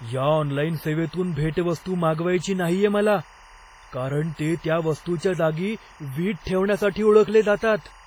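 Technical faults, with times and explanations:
Throughout, timecode bleed: a steady chirping warble sits roughly 25 dB under the speech, with a spectrogram showing striped bands near 1 kHz and 2 kHz pulsing at 24 frames per second.
Throughout, a washy, ringing smear with breathing hiss, likely WMA compression at a low bitrate near 24 kbps; the spectrogram shows blurred transients and blocky gaps where weak components vanish.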